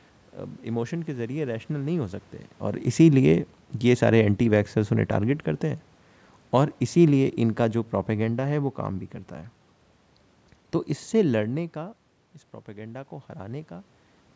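From 2.94 to 5.44 s the automatic gain falls. The call's gain control judged the input too loud, or its background noise too strong, and eased its gain down by about 3 dB, so the speech sinks gradually over those two and a half seconds, the room noise dropping with it.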